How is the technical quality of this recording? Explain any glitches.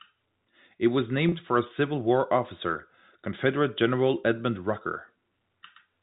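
One glitch stands out in this telephone-band speech, carried by G.711 coding that leaves nothing above 4 kHz. From 1.29 to 1.32 s, just before "for a", packet loss with pitch repetition fills a 30 ms gap, about one lost packet. The decoder loops the last pitch period, heard as a brief buzzy hold. The waveform shows repeated cycles fading in level, and a spectrogram shows frozen, evenly spaced harmonics.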